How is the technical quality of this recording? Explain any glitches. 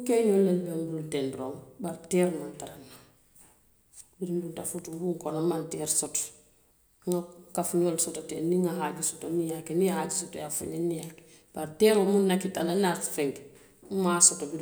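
There's one glitch, right at 4.79 s: a block of digital silence. For about 0.27 ms the speech drops out and jumps back with no fade, probably because the output buffer wasn't filled in time. It's far too brief to hear as a gap, so it comes across as a tick or dip.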